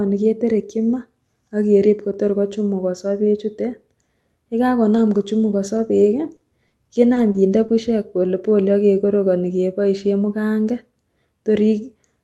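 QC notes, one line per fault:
4.97–7.70 s, scattered short gaps: about five brief packet losses, none much past 40 ms, patched by continuing the prior sound, leaving ticks and smears before "bushek polepole ak kekorokoni".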